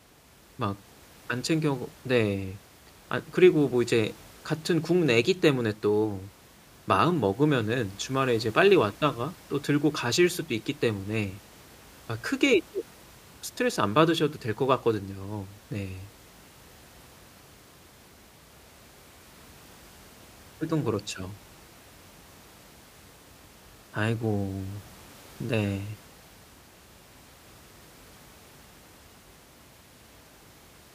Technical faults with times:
none

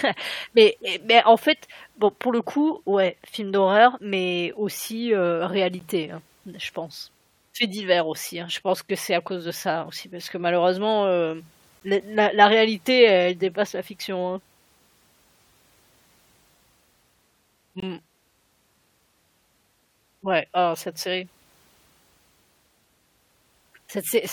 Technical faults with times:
5.79 gap between stream segments
11.80 gap between stream segments
17.80-17.82 gap between stream segments

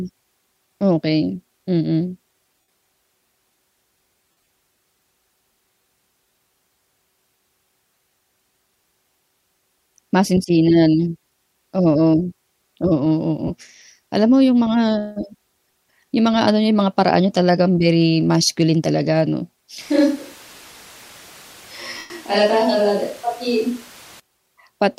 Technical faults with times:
2.61-2.70 lost LE Audio frames
4.29-4.48 lost LE Audio frames
13.47-13.51 lost LE Audio frames
19.81-24.20 switch to a distant microphone
21.98-22.10 lost LE Audio frames

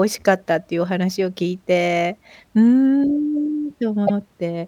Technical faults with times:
4.06-4.17 repeated frames

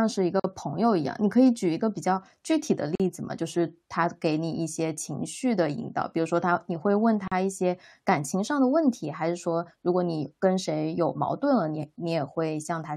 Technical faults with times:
0.40-0.44 gap at a join of encoded pieces
2.95-3.00 gap at a join of encoded pieces
7.28-7.32 gap at a join of encoded pieces

